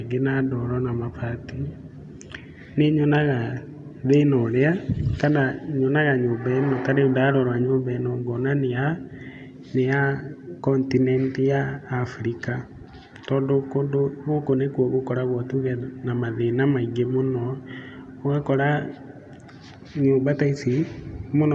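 No technical faults are audible.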